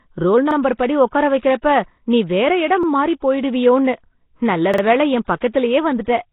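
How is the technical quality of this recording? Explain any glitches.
The recording is heavily degraded: the speech is coded roughly throughout and carries audible stutters and smeared attacks.

Nellymoser compression: The whole clip sounds rough and hissy, with a smeared, underwater colour, and nothing is present above about 3.8 kHz, so the speech is dull and band-limited. The likely cause is Nellymoser Asao at 16 kbps. That codec spends a fixed, small bit budget on short blocks, so weak frequency bands get no bits and are filled with noise. The result is that grainy halo around the speech.

Repeated buffer: Brief stutters occur at 0.51 s, 2.83 s and 4.74 s. At each one, a short slice of sound plays again with a hard join. The first two repeat once. The one at 4.74 s repeats twice, so it runs to 4.83 s. Each repeat lasts about 46 ms, which fits a 2048-sample buffer that was replayed when fresh audio did not arrive in time.

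Pre-echo: At 1.38 s and again at 5.39 s, a short wash of hiss comes just before a sharp onset, and the attack itself sounds softened. The first spreads about 44 ms ahead of the onset and the second about 24 ms. The codec spreads its quantisation noise evenly across each block, so noise sized for the loud attack also fills the quiet moment that precedes it within the same block.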